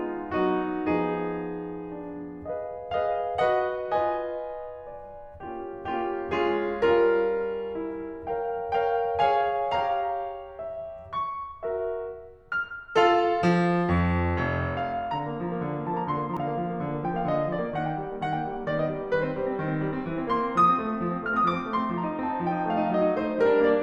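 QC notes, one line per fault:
16.37 s, damaged data in a compressed stream: corrupted data in the encoded music reached the decoder, which misread that frame and lost sync until it found the next valid frame header, so a brief glitch cuts across the music.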